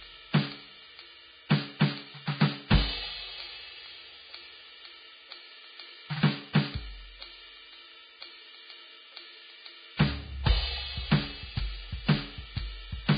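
Music runs the whole way with a dull, hissy, grainy top end, roughened tones and smeared attacks, and nothing above about 4.9 kHz. That points to heavy Vorbis compression, likely at a very low bitrate around 15 kbps, with treble detail coarsely quantised into noise.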